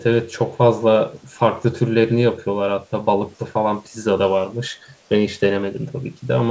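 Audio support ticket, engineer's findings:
Faint delayed copy of the speech, 1.17 to 1.39 s, trailing the original by about 0.4 s and far below it in level. Echo leak, likely at the loudspeaker end: echo canceller passed residual mic pickup back into the call.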